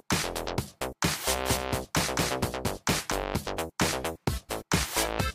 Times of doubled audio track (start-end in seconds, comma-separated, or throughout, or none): 1.46-3.12